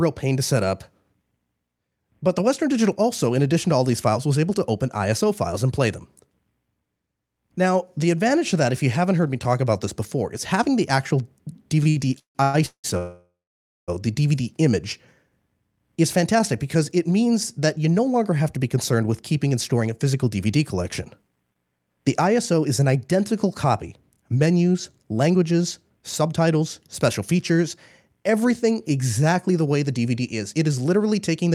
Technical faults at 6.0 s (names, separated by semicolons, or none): none